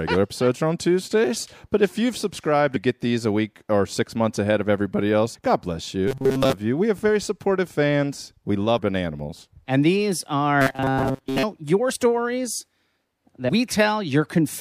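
Speech with compressed frames skipped at 2.75 s (between "if you've subscribed" and "get these a week"), 5.34 s (after "months ahead of everybody"), 8.77 s and 13.48 s, each jumping about 150 ms (the last about 100 ms) of 24 ms frames. From 6.08 to 6.54 s and 10.62 to 11.44 s, robotic sound from repeated short buffers gives a rigid metallic buzz at 133 Hz, likely a looped 7.5 ms buffer.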